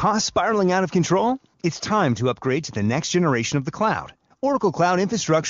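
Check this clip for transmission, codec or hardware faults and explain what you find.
No transmission, codec or hardware faults.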